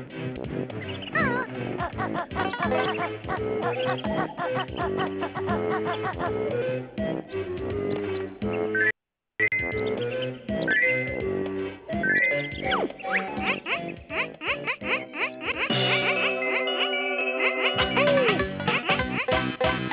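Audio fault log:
No technical faults can be heard; the signal stays steady and continuous all the way through.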